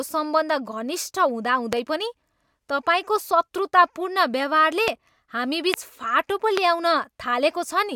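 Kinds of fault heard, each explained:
Loud pop: four sharp, brief pops, each about 20 ms long, jump far above the speech at 1.73, 4.88, 5.74 and 6.57 s while the talking carries on underneath. Each is likely a sudden voltage pulse from a switch, plug contact or static.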